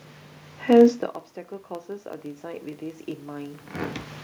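From the start and for the whole clip, the filter restarts on every block, so each block begins from a zeroed state with a small transient. The result is a steady buzz at about 23.4 Hz, which fits a 2048-sample block, rising and falling with the speech level.

From 1.67 s to 3.71 s, the automatic gain rises. After the input level falls by about 24 dB, the control raises its gain gradually by about 7 dB, and voice and room noise swell together over those two seconds.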